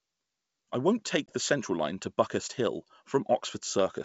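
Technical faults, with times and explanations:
1.27 to 1.32 s, packet loss on an ADPCM call: after "I won't", about 20 ms (likely one packet) drops to silence, a flat-edged gap in the waveform and a blank vertical strip in the spectrogram. The decoder's predictor and step size then mismatch the sender's, so the speech resumes briefly distorted before resettling.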